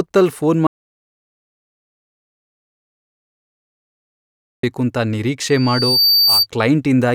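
Speech recording with two faults. An audio dropout to silence runs from 0.67 s to 4.63 s: the signal stops abruptly and nearly 4 s of silence follows, with no room tone, before the speech resumes mid-flow. This is likely a lost input or stray mute while recording continued. From 5.49 s to 6.47 s a loudspeaker feedback squeal appears, a single 4.6 kHz tone that swells over roughly half a second to sit around 5 dB above the speech. The microphone was picking up its own loudspeaker with loop gain above unity at that frequency.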